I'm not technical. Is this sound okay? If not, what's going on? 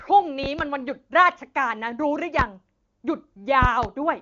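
No. There are five loud pops in this speech. Two quick pops land between 0.44 and 0.63 seconds, one between 2.39 and 2.43, and two more between 3.63 and 3.87. The speech carries on underneath them. The likely cause is a sudden electrical jolt, such as a plug, a switch or static.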